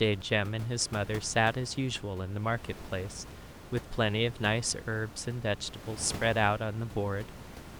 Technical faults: none

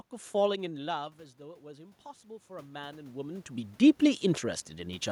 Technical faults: automatic gain rising

